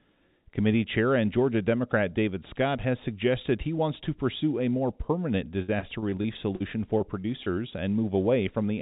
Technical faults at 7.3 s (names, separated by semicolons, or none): short concealed packet loss